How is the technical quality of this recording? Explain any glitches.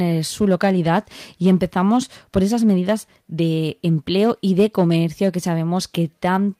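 No glitches or faults heard.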